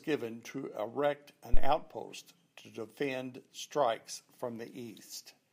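At 1.54 s, just after "to erect", a phantom power thump interrupts the speech: a deep, low-frequency thud that peaks at about -10 dBFS and dies away with a 48 ms decay, gone by 1.75 s. A supply switching on a live input sent a DC step through the coupling capacitors. Unlike a plosive pop, it has no link to the speech, and its smooth exponential decay lacks the scraping texture of handling noise.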